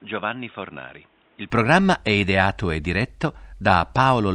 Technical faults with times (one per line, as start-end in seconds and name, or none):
0.00-1.50 input switched to a poorer device